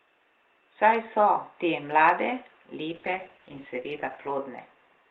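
Call bitrate drop from 2.91 to 4.71 s in this speech, just after "so te mlade": the audio turns coarse and muffled as the highs above 8 kHz vanish for about 1.4 s, which fits the encoder falling from 32 to 10 kbps.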